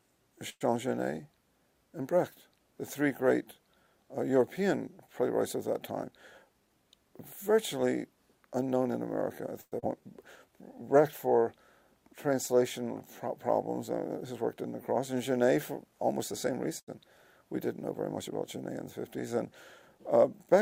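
At 0.49 s the sound stops moving forward for 0.11 s: the last sound is carried on, dies away, and ends in about 40 ms of silence before the audio resumes where it left off. This is a call audio freeze, likely caused by delayed packets emptying the jitter buffer, so a gap was inserted and nothing is lost. The same thing happens at 9.61 s, lasting 0.11 s.

From 6.04 to 6.83 s the audio runs hurried at unchanged pitch, at 108% speed. This jitter buffer speed-up trims short pitch-period pieces over and over to reduce excess delay, about 70 ms in total.

At 9.80 s playback jumps forward, with around 70 ms of audio gone and the two sides joined almost directly. This skip ahead comes from a stretch being dropped while later audio was already waiting.

From 10.01 to 10.76 s sounds are drawn out at the same pitch, at 95% speed. In this jitter buffer slow-down the receiver repeated single pitch periods or bits of pauses to build a reserve, adding 49 ms.

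From 15.71 to 16.71 s a second jitter buffer speed-up plays at 107% speed, removing roughly 70 ms.

At 16.80 s a sound is held 78 ms too long before playback continues with nothing missing. This short stall from a late packet means the buffer ran empty and the last sound was stretched until the packet arrived.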